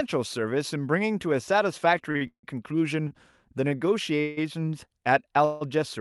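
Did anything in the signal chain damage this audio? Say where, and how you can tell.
Yes, at the network and jitter-buffer stage of the call path, in two ways.

Short stalls from a late packet occur at 2.11–2.17, 2.17–2.23, 3.08–3.13 and 3.69–3.73 s. At each one the speech is held for 33, 42, 28 and 21 ms respectively, a sound stretched slightly too long with a faint buzz or dip, and then the speech resumes exactly where it left off. The packet arrived after its playout time, the buffer ran dry, and the receiver extended the last sound to cover the wait. No speech is lost. Everything after each stall is simply pushed later.

Call audio freezes appear at 2.27–2.45, 4.21–4.39 and 5.45–5.63 s, each about 160 ms long. The last sound continues as a decaying buzz or hiss. In the first freeze this drops to 90 ms of silence before the speech returns. Afterwards the speech continues from the point where it stopped, so a gap has been inserted rather than material removed. 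The likely cause is packets held up in transit long enough to empty the jitter buffer completely. The band limit near 12 kHz comes from the Opus codec in this path.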